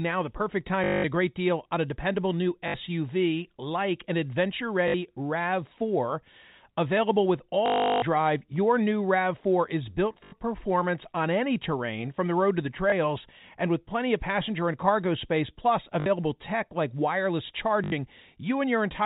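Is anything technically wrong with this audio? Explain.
Yes, there's packet loss with the last packet repeated, at 0.84–1.04, 2.68, 4.88 after "like an adventure", 7.66–8.02, 10.24 after "is built", 12.9, 16.0 and 17.84 s. The receiver replays the previous packet through each gap, which fits 20 ms packets, so you hear buzzy robotic stutters lasting up to 360 ms.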